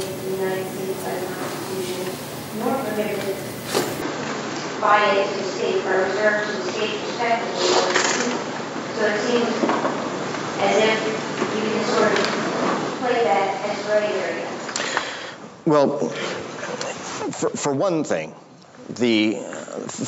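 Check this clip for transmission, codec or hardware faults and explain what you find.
One fault is present. Input switched to a poorer device, from 4.02 s to the end: likely a change to a narrower-band microphone, cutting everything above 7.6 kHz and shifting level roughly 5 dB, with a faint new noise floor.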